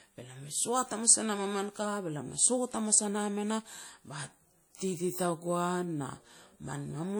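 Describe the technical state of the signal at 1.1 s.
At 1.1 s the speech carries layered codec smearing and swirl, present throughout the clip, with nothing above about 20.2 kHz. This is likely transcoding between lossy codecs, pointing to a WMA stage near 48 kbit/s re-encoded as MP3 near 96 kbit/s. Unlike single-codec compression, two distinct artefact textures are heard together.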